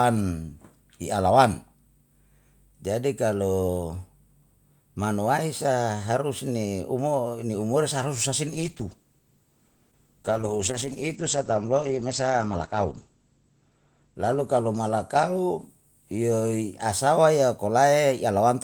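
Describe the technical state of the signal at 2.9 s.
At 2.9 s the speech signal is intact, with no fault to be heard at that moment.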